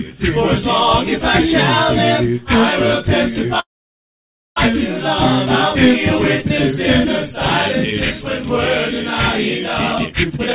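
A narrowband call recording, with nothing above 4 kHz, which fits G.711 A-law telephone coding, carrying two timing faults. From 3.60 to 4.58 s the sound stops in a call audio freeze. A brief fading continuation of the last sound gives way to about 0.91 s of silence, then the audio resumes exactly where it left off, so nothing is lost but almost a second of delay is inserted. The likely cause is packets held up in transit until the jitter buffer ran dry, with the receiver bridging the wait before the late audio arrived. From 9.82 to 10.54 s a jitter buffer speed-up makes the sound rush forward at about 157% of normal speed with its pitch unchanged, so it feels hurried. The receiver, holding more buffered audio than its target, repeatedly cut out tiny pitch-period-length slices to catch up, trimming something like 0.4 s in total.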